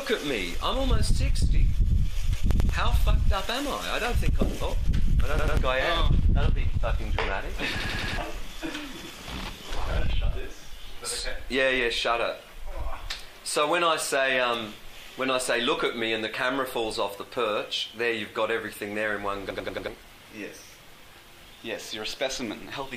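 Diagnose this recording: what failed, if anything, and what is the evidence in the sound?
The driver or buffer stage failed, producing a repeated buffer. Stutters occur at 2.51, 5.39, 7.80, 9.01 and 19.51 s. Each repeats one piece of about 93 ms with a hard join. That fits a 4096-sample buffer. It plays two, two, four, one and four extra times, so the stutters at 7.80 and 19.51 s run longest, about 0.37 s. Fresh audio arrived late, so the device replayed its last block. Roughly 0.1 to 0.4 s of sound is lost each time.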